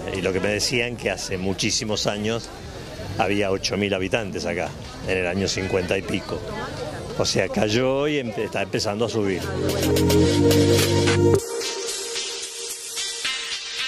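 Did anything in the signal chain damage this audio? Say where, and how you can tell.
Yes. Wi-Fi interference entered at the analogue wiring from 0.71 to 7.26 s. A steady tick repeats every 102.4 ms, roughly ten a second, sitting some 30 dB under the audio. That spacing matches a nearby radio's beacon, which the circuit rectifies into audible clicks.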